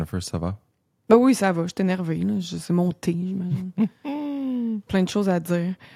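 No technical faults are audible anywhere in this speech recording.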